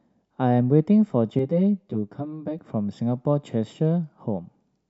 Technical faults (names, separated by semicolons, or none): channel delay (comb filtering)